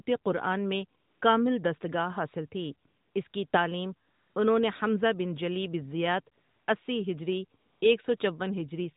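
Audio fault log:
1.00–1.22 s, 2.88–3.16 s, 3.28–3.34 s, 3.48–3.54 s, 4.08–4.36 s, 6.36–6.68 s, 7.60–7.82 s, 8.18–8.20 s: AMR comfort noise. In each pause the phone stopped sending speech frames, and the receiver filled the gap with a smooth synthetic hiss. That hiss switches in and out in place of the real background, in audio coded lightly, which fits the 12.2 kbps AMR-NB mode.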